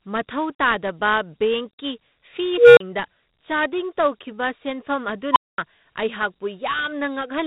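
Speech runs through Dialogic VOX ADPCM for its whole length. Nothing is heard above about 3.8 kHz, and a gritty hiss rides on every syllable and falls away in the pauses. The 4-bit adaptive coder's step size chases the signal, so the noise tracks loudness. The sound points to 32 kbps at 8,000 samples a second. Plain telephone-band filtering would cut the top off cleanly without that speech-following grain. Two unstable filter events break in. From 2.58 to 2.80 s a tone of roughly 500 Hz swells for about 0.19 s, clips, then drops to silence for 35 ms. From 5.32 to 5.58 s a tone near 1 kHz surges in only 36 ms before a 0.22 s dropout. A recursive filter with bad coefficients keeps feeding its output back until the numbers overflow, and the path goes dead until the filter resets. Acoustic feedback howl is different: it tends to hold and waver rather than end abruptly in silence.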